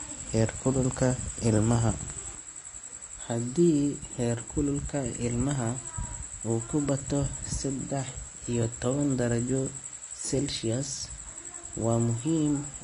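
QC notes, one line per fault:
Throughout, Vorbis compression: the speech has nothing above 10.6 kHz, and its treble is plainly hissy and grainy, with roughened tones and blurred attacks. The likely cause is low-quality Vorbis coding, which fits about 33 kbps, turning fine detail into noise of similar energy.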